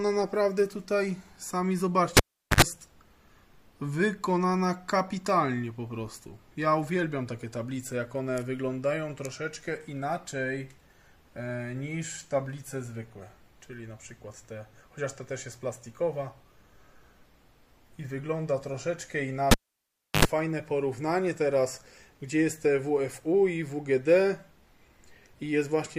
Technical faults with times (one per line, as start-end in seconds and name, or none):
2.17-2.62 cable pulled and plugged in
19.51-20.25 cable pulled and plugged in